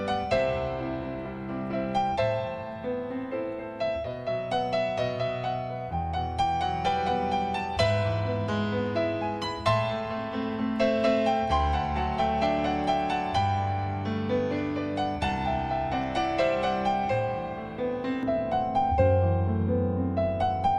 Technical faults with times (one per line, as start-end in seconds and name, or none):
18.23-20.78 de-emphasis applied wrongly